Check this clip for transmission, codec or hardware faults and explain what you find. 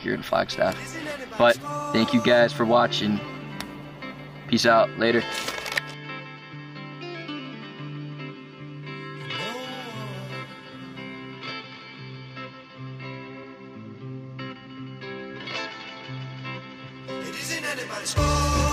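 Compressed frames are skipped twice, at 13.42 s and 14.65 s. Missing or rejected frames make the audio jump ahead, about 70 ms and then about 20 ms, consistent with 23.2 ms frames.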